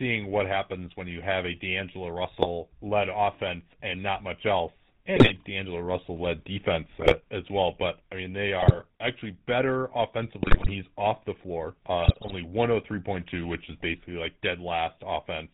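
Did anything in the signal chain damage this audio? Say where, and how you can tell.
Yes. The codec stage applied the GSM full-rate codec throughout. Its vocal-tract model, driven by a sparse regular pulse excitation, leaves the speech band-limited below 4 kHz with a plainly audible buzzy, gravelly roughness. This fits the 13 kbps full-rate coder.

GSM bit errors on the network link reached the decoder at 2.38–2.47, 5.16–5.34, 7.00–7.16, 8.60–8.86, 10.40–10.72 and 12.04–12.33 s. Corrupted filter, pitch and gain values distort each affected frame, causing brief squawks, pops and gargling.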